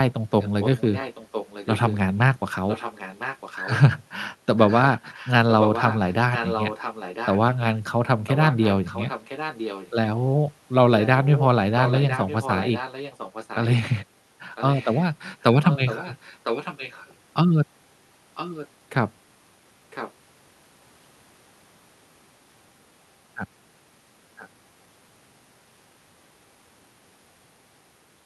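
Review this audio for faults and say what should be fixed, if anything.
An echo leak, likely a far-end loudspeaker whose echo canceller let its microphone pickup through, returns the speech about 1.01 s late: roughly 10 dB down from 0.39 to 17.14 s, then fainter at 18.35–18.68 s and 19.9–20.12 s, and faintest, about 25 dB down, at 24.37–24.49 s. Enabling or retuning that side's echo cancellation to cover a one-second delay, or giving that participant a headset, would prevent it.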